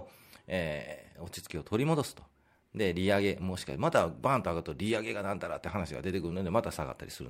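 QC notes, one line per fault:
2.04 to 7.29 s, sample clock jitter: the converter clock wanders by a few microseconds, so each sample is taken slightly early or late at random. On speech, the timing error turns into an amplitude error wherever the waveform changes fast, adding a hiss and grainy roughness at roughly 30 dB below the signal. It swells on loud syllables and sibilant, high-frequency sounds, and drops away in the pauses between them.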